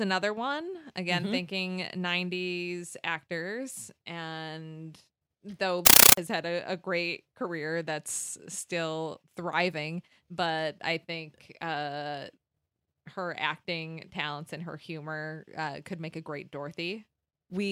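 At 5.86 s, right after "actors and though", the speech gives way to loud, chattering static until 6.17 s, before "had a a great". This is a compressed stream played as audio. Undecoded AC-3 data, which fits a 448 kbps stream, is treated as samples. It arrives as 9.33 ms noise bursts repeating 31.25 times a second.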